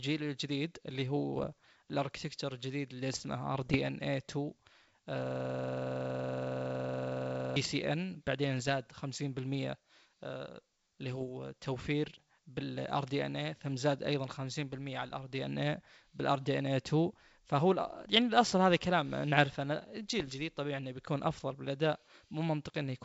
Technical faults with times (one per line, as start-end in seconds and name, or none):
1.37-1.45 bit errors on an ADPCM link
3.55-3.77 bit errors on an ADPCM link
5.26-7.56 system hang loop
8.59-8.71 bit errors on an ADPCM link
11.12-11.25 bit errors on an ADPCM link
20.20-20.34 bit errors on an ADPCM link